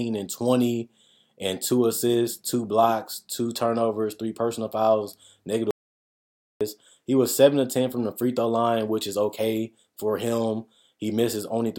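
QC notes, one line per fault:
5.71–6.61 s, audio dropout to silence: the speech cuts out mid-flow into silence for about 0.9 s, with no room tone, likely from a lost input.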